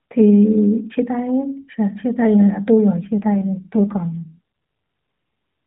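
From 2.95 s to 4.39 s the speech turns rougher, buzzier and more synthetic, with the same narrow mobile band and no gap. That is an AMR rate drop, consistent with the AMR-NB codec being stepped down from 12.2 kbps to 5.9 kbps to protect a weak radio link.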